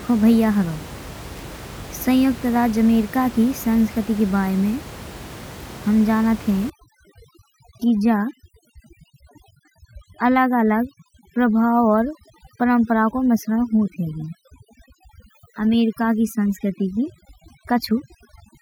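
Overdone noise removal from 6.70 s to the end: room noise about 17 dB below the speech is gated too hard, so the background drops to twinkling near-silence.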